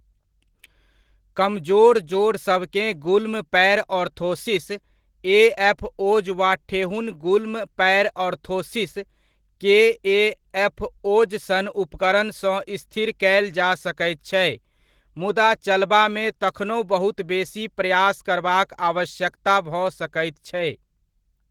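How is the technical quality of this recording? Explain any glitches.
The recording is clearly degraded by a single fault that runs through the whole speech clip: Opus voice compression.

From start to finish, the encoder works in hybrid mode. A linear-prediction coder handles the band below 8 kHz, and a transform layer covers the range above it up to about 20.2 kHz, in 20 ms frames. The bitrate is too low for that full bandwidth, about 16 kbps judging by the damage. The excitation is therefore coded coarsely, and the voice comes out hoarse and slightly robotic, with plainly audible codec artefacts.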